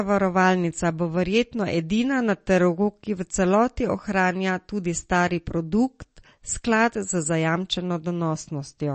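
From start to finish the speech sounds watery and swirly, with metallic chirping on s sounds, smeared consonant onsets, and nothing at all above 8.4 kHz. The likely cause is MP3 compression at a starved bitrate, which fits something near 35 kbps. The encoder cut off the treble at a fixed frequency and zeroed weaker frequency lines, which then flicker in and out from frame to frame, leaving that unstable, bubbling texture plainly audible.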